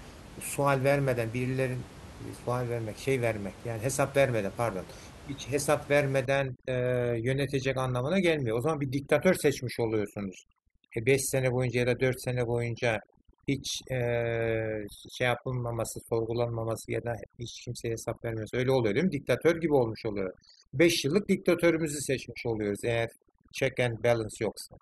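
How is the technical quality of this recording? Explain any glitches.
The quality drops partway through, from a single fault. From 6.25 s to the end, overdone noise removal takes hold. The denoiser cuts frequency bands sitting close to its noise estimate, and quieter parts of the speech vanish with them. The room noise, about 19 dB below the speech, drops and breaks up into twinkling specks.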